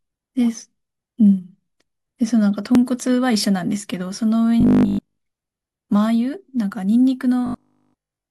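At 2.75 to 2.78 s, the timestamps of two stream segments overlap, and the player trims audio that was never actually doubled. This overlap between stream segments removes about 30 ms, so the waveform jumps and a tiny skip is heard. From 4.61 to 5.19 s, new audio is likely arriving too seldom, so the player repeats 20 ms buffers in place of most of the real signal. This robotic sound from repeated short buffers imposes a fixed 50 Hz buzz, turning the speech rigid and metallic. At 6.71 to 6.75 s, the same overlap fault cuts about 40 ms, causing another skip roughly 4 s after the first, which fits 4-second segments. From 7.46 to 8.30 s, the repeated 20 ms buffers return, and the same 50 Hz metallic buzz carries the speech through to the end.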